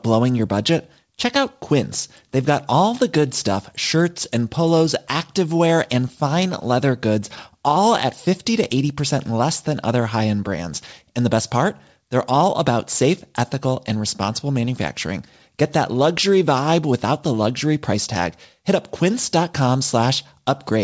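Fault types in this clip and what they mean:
There are no fault types in this clip.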